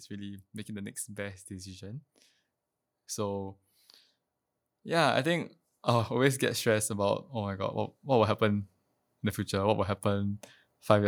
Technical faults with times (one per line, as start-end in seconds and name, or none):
4.82-8.69 automatic gain rising